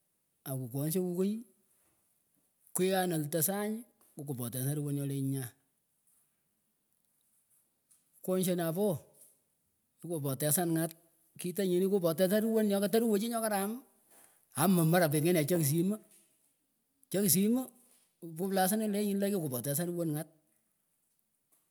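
No technical faults are audible anywhere in the recording.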